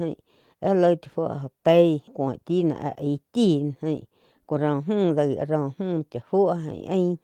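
At 2.07 to 2.09 s the speech makes a skip ahead. About a second and a half of audio was dropped while later audio was already waiting. Nothing fills the gap. The two sides are butted together, so playback lurches abruptly forward.

From 4.04 to 5.62 s there is a jitter buffer speed-up. Too much audio had built up, so the receiver cut short pitch-period pieces repeatedly, around 150 ms in all. Speech runs at 110 percent speed, same pitch, sounding hurried.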